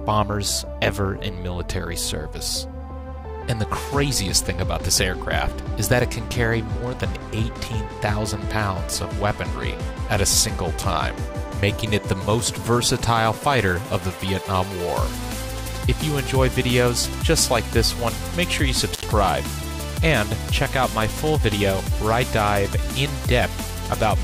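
At 18.92 to 19.06 s, an intermittent contact in a loose cable or plug breaks the signal for about 77 ms, cutting the sound out with crackle at both edges.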